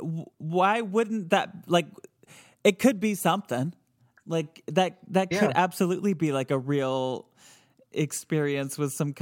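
No technical faults can be heard in this speech recording.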